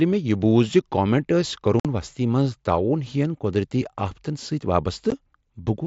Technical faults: unconcealed Bluetooth headset packet loss

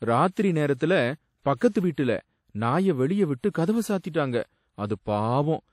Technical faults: WMA compression; pre-echo

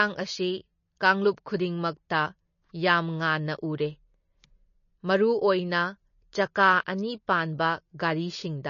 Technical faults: MP3 compression

